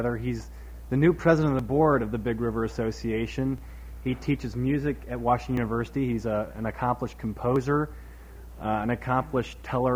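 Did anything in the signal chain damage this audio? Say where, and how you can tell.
Yes. Tiny skips in the sound occur at 1.59, 3.58, 5.57 and 7.56 s, spaced about 2 seconds apart. That regular rhythm points to overlap between stream segments at the streaming stage: overlapping timestamps made the player trim a few milliseconds at each boundary, so the waveform jumps.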